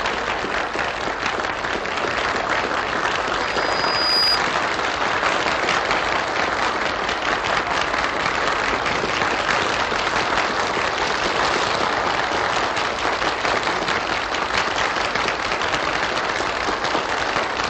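At 1.52 s the audio jumps ahead, and you hear compressed frames skipped. About a fifth of a second of the sound never plays, which fits roughly ten frames of 23.2 ms that were missing or rejected by the decoder. The same thing happens again at 17.17 s, this time a shorter jump of around a tenth of a second, or about five frames.

Between 3.42 and 4.43 s there's a loudspeaker feedback squeal. A microphone was picking up the speaker it feeds, and at 4.9 kHz the loop gain went over one, so that tone kept reinforcing itself. It swells over roughly the first 0.7 s into a thin, piercing whistle that ends up a few dB louder than the sounds underneath, then ends at 4.43 s.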